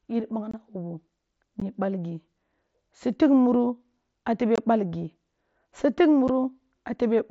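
Unconcealed Bluetooth headset packet loss at 0.51–0.54 s, 1.60 s, 4.56–4.58 s and 6.28 s: headset voice packets dropped without concealment, leaving brief, hard-edged silent gaps of 7.5 to 22.5 ms in the speech.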